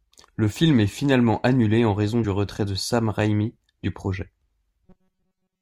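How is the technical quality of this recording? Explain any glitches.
Two glitches stand out: a tiny skip at 2.23 s and a buzzy, robotic stretch from 4.86 s to the end at 5.62 s.

At 2.23 s there are compressed frames skipped. About one 23.2 ms frame of the coded speech never reaches the output, so roughly 20 ms of audio simply vanishes and the speech jumps forward. That jump without any gap, and the fact that it happens only once, is what separates it from a dropout or buffer underrun, which would leave a gap of silence.

From 4.86 s to the end, the speech turns into a rigid metallic drone. This is robotic sound from repeated short buffers. The likely cause is that fresh audio was arriving too rarely, so playback kept looping the last tiny chunk for most of the time while real audio was discarded. The loops impose a fixed buzz near 188 Hz, which fits a buffer of roughly 5.3 ms, and the speech only loosely shows through. 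A fixed pitch that ignores the natural intonation is the tell. Ordinary codec warble wobbles irregularly instead of locking onto one steady tone.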